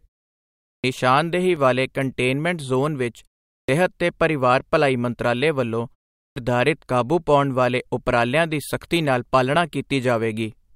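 Speech with two technical faults. Clipped start after a pause occurs at 0.71, 3.57 and 6.23 s. Each time, roughly 115 to 133 ms of the first sound after silence is swallowed because the output device sleeps and must wake again. This differs from muted pauses: those fade only the background between phrases and lose no speech. A single overlap between stream segments at 1.56 s is heard as a brief click or skip. It fits a segment boundary where doubled time stamps caused a few milliseconds to be cut away. It differs from the clipped starts because it is a tiny skip where the waveform jumps rather than a lost onset after a pause.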